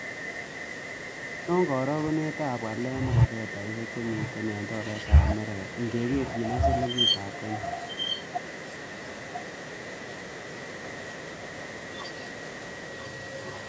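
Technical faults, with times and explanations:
3.86–4.34 s, 5.59–6.37 s and 7.32 s to the end, echo leak: a copy of the speech returns about a second late, loud at first, fainter later, likely from a speakerphone's echo canceller letting it through.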